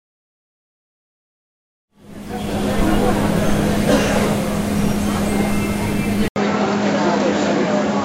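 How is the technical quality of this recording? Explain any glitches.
The recording has one clear glitch near the end, after a gentle fade-in that rises from around 2 s to full level by 3.01 s.

At 6.28 s the sound drops out for about 80 ms, then returns duller and boxier, with nothing above about 7.6 kHz and a new background noise roughly 35 dB under the signal. The overall level barely changes, but the tone and noise floor are different through to the end. This is likely an input switched to a poorer device mid-recording, such as a second microphone or a headset's call profile, whose narrower band and own noise replace the original pickup.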